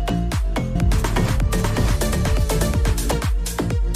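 From 0.75 to 3.11 s a full-band copy lands about 0.7 s behind at roughly equal level and cuts in and out abruptly: a doubled audio track, likely from a second capture path.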